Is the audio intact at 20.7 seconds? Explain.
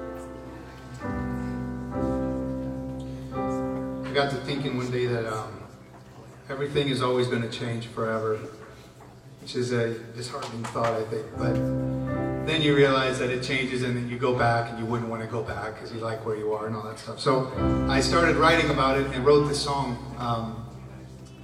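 No, compressed frames are skipped from 20.67 to 20.72 s. Roughly a tenth of a second vanishes, about two 46.4 ms frames, so the audio jumps ahead. The waveform shows a discontinuity at the join.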